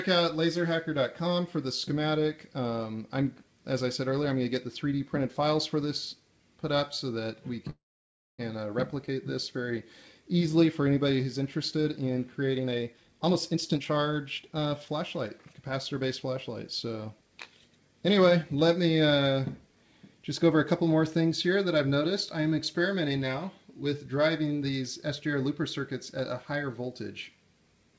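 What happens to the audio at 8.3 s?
At 8.3 s the audio is inside a call audio freeze, from 7.70 to 8.42 s, likely caused by an emptied jitter buffer. The last sound smears into a fading buzz, then about 0.59 s of flat waveform and blank spectrogram. Playback then resumes where it stopped, with nothing lost.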